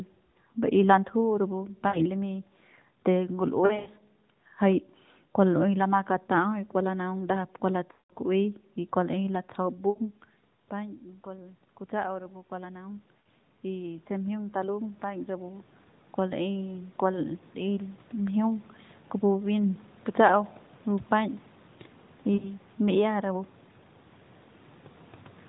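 Lost AMR speech frames occur at 1.88, 3.66 to 3.89 (scattered, 120 ms lost over 200 ms), 7.92 to 8.12 (180 ms, the longest), 9.90, 13.20 and 22.34 s (60 to 80 ms each). The decoder repeats its last good pitch and vocal-tract settings at falling gain, so each gap sounds drawn out and fading rather than abruptly cut. The 180 ms run fades almost to nothing. Packet-loss gaps would instead cut off abruptly or click.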